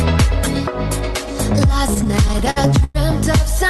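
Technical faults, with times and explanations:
1.87–2.97 s, repeated stalls (stutter): packets arrived late and the jitter buffer ran dry twelve times, so the receiver stretched the last sound, up to 105 ms per gap, losing nothing but dragging. Spectrograms show smeared, repeated bands; waveforms show copied cycles fading in longer holds.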